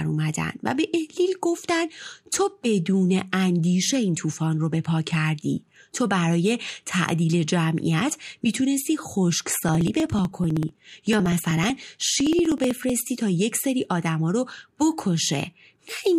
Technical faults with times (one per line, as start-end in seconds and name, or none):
9.43-12.89 periodic USB or driver dropouts